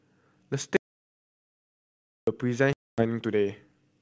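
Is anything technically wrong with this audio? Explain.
Yes, there are two faults in this speech. From 0.77 to 2.27 s, an audio dropout to silence leaves about 1.5 s of silence with no room tone, likely from a lost input while recording continued. At 2.73 s, packet loss on an ADPCM call leaves a hard-edged 250 ms silent hole. The decoder's predictor then restarts out of step, so speech resumes with brief distortion until about 3.05 s.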